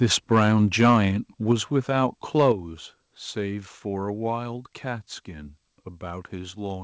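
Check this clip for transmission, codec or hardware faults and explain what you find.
Two faults are present: distortion on three loud peaks, then a sudden level drop.

Microphone overload occurs from 0.34 to 0.48 s, 0.8 to 0.97 s and 2.38 to 2.5 s. The loudest peaks hit the converter's ceiling and their tops are sliced flat. The cause is likely an input volume set too high. The first and third bursts go about 3 dB over, with only a small share of samples cut. The middle one goes about 6 dB over, with roughly a tenth cut. Each sounds harsh and crackly on the loudest syllables.

Microphone volume stepped down at 2.52 s, just after the third distorted peak. The whole level falls by about 6 dB in one step, with speech and background dropping together. This is likely the call software reacting to the clipping by lowering the device's input gain. It sounds like an abrupt jump to a quieter level, not a gradual fade. 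The signal also has nothing above 8 kHz, which fits a wideband call codec.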